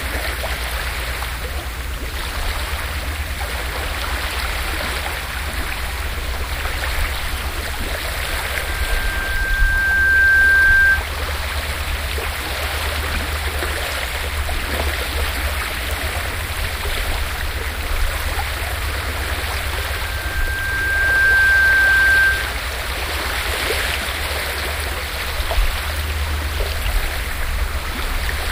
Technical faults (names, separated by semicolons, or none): loudspeaker feedback squeal